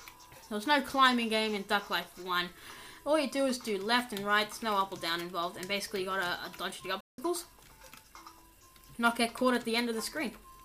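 The player most likely ran short of data or had its output thread held up, so no samples reached the output for about 174 ms. This playback stall shows as a sudden dropout in mid-flow, with the audio cutting to silence at 7.01 s and resuming at 7.18 s. The gap is long enough to register as a clear break rather than a click, and the sound carries on after it.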